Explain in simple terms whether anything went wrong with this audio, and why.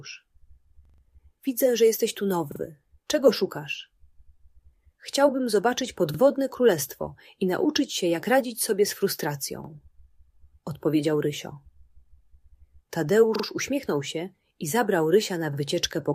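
Something did go wrong: the audio stutters six times, at 0.85, 2.52, 6.14, 9.64, 13.36 and 15.53 seconds. That's a repeated buffer. New audio arrived late, so the player replayed the last chunk it had, about 43 ms long, which fits a 2048-sample buffer. Each one sounds like a quick stammer with hard joins. At 0.85 s the chunk plays four extra times, at 2.52 and 13.36 s twice, and once elsewhere. Essentially nothing gets skipped afterward.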